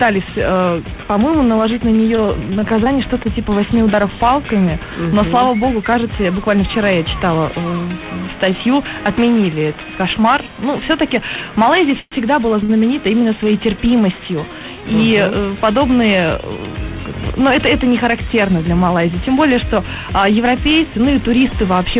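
Repeated packet loss (robotic sound) runs from 2.16 to 2.88 s. Six short holes, the longest 25 ms, are each bridged by extending the preceding sound, so about 80 ms of audio is lost and the stretch turns choppy and mechanical. A call audio freeze follows at 12.00 to 12.14 s. The last sound is held for 118 ms, thinning into about 20 ms of silence before the audio resumes with nothing dropped. The likely cause is delayed packets draining the jitter buffer, adding a gap to the timeline. A short stall from a late packet occurs at 12.64 to 12.71 s. One packet arrived behind schedule, so the receiver drew out the current sound by 52 ms, leaving a brief held moment before continuing from the same point with nothing missing. Throughout, the call path leaves nothing above 4 kHz, which fits G.711 mu-law at 64 kbps.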